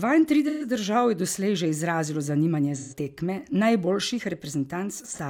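Speech, with three brief patches of AAC frame loss with concealment at 0.48–0.64 s, 2.78–2.96 s and 5.02–5.19 s. In each, the decoder rebuilt missing audio from the last good spectrum, so the sound turns smeared and noisy. The first two cover about 128 ms each, which fits three lost frames. The last is scattered gaps, the longest about 40 ms. A spectrogram shows blurred, grainy texture with harmonics smeared; the waveform loses its syllable shape there.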